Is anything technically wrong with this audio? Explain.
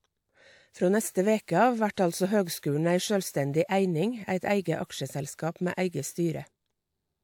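Yes, there's pre-echo in this speech, three times. It shows up at 1.94 s, just after "neste veke av", lasting about 33 ms; at 2.59 s, right before "ei sjølvstendig eining eit", for about 42 ms; and at 5.34 s, again about 42 ms. The transform codec spread the quantisation noise across a whole block, so the noise meant for a sharp onset leaks into the quiet just ahead of it. You hear a brief hiss before each attack, and the attack itself lands a bit smeared.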